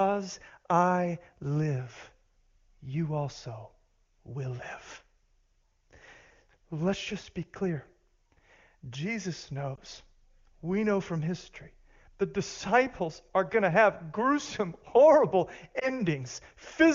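At 9.76 to 9.79 s, and again at 15.79 to 15.89 s just after "to have gruesome horrible", a single lost AMR speech frame leaves a 20 ms gap. The decoder fills it by reusing the last pitch and vocal-tract settings at reduced gain, producing a brief dip or warble.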